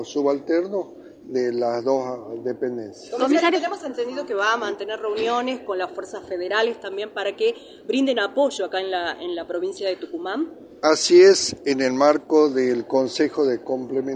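No technical faults can be heard anywhere in the audio.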